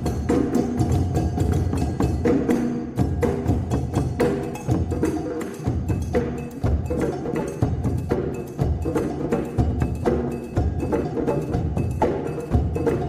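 No technical faults can be heard anywhere in the clip.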